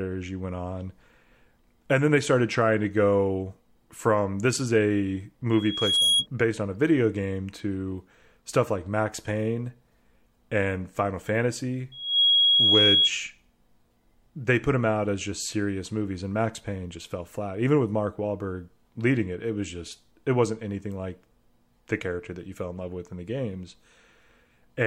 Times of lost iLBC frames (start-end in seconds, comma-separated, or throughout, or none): none